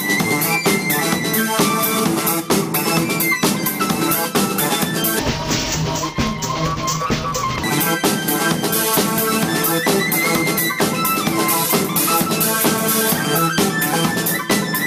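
From 5.19 s to 7.64 s the audio turns dull and robotic, with a buzz near 172 Hz and no clear octave drop. This is interleaved audio read as planar. Alternating left and right samples are split into halves of each 5.8 ms block, which fits a 256-sample block.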